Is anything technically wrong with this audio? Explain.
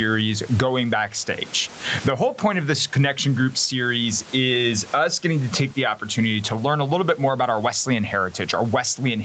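Yes. Gain pumping runs throughout: the level swings by about 15 dB, likely from excessive input gain driving a fast limiter.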